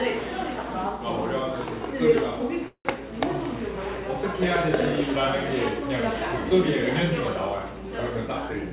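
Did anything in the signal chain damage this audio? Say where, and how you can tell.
Yes. At the network and jitter-buffer stage, packets were likely held up on the way, leaving the receiver with nothing to play from 2.68 to 2.87 s. This is a call audio freeze: the last sound is stretched into a fading buzz or hiss for about 170 ms, the final 80 ms of it silent. Playback then resumes exactly where it stopped, so nothing is lost, but everything after it runs about 170 ms late. The band-limited call path, with nothing above 4 kHz, is audible throughout.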